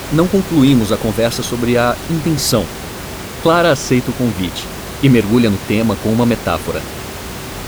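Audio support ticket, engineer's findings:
No system fault found in the speech signal; the room's background noise sits about 13 dB below the speech and comes from the recording environment, not the audio path.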